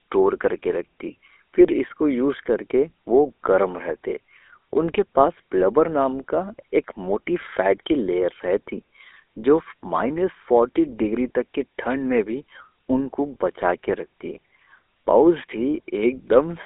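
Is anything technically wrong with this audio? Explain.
Yes. Throughout the whole clip the speech carries GSM full-rate codec damage. This codec models the vocal tract and drives it with a sparse, regularly spaced pulse excitation, discarding most of the fine detail, a coarseness that fits its 13 kbps rate. The voice sounds buzzy and gravelly, and the line band confines it to 300 Hz to 3.6 kHz. A spectrogram shows nothing above 3.6 kHz or below 300 Hz, with smeared, grainy harmonics instead of clean striations.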